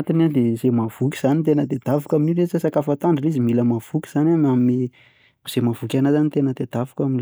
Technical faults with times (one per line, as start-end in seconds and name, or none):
0.00-1.00 channel delay (comb filtering)